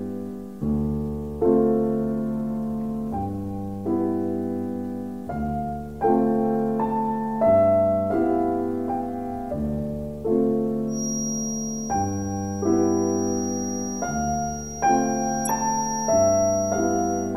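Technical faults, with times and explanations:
10.86 to 17.36 s, feedback whistle: a thin, steady tone at 5.7 kHz comes in and stays to the end, sitting roughly 10 dB under the sound and swelling and fading slowly. It's likely a speaker-to-mic loop hovering right at the edge of feedback without running away.
15.45 to 15.50 s, corrupt frame decoded: a short glitch, peaking somewhere around -15 dBFS, cuts through for about 50 ms. That fits a couple of damaged compressed frames the decoder played anyway, putting energy at the wrong frequencies for their length.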